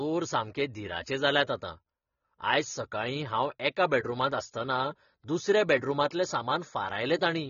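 Throughout, the speech sounds dull and smeared, with nothing above 6.9 kHz and a fizzy, warbling edge on sibilants. This is AAC compression, likely AAC-LC at a low bitrate around 24 kbps, which lowers the cut-off and starves the remaining bands of bits.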